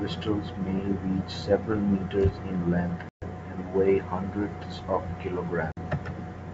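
Packet loss on an ADPCM call strikes twice. At 3.09 s, right after "several meters in length", the speech drops into hard-edged silence. About 130 ms of audio is gone, which fits roughly fifteen short packets. The decoder's predictor and step size lose step with the sender's. So at 3.27 s, on "and weigh hundreds of", the speech returns with brief, slight distortion. A shorter hole follows from 5.72 to 5.79 s, about 50 ms, with the same rough re-entry.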